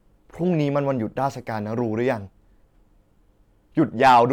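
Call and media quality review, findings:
Hard clipping, 4.03–4.22 s: crackle on loud speech peaks near the end. Signal driven about 6 dB past full scale at some gain or conversion stage; peaks flattened, adding high-frequency harmonics.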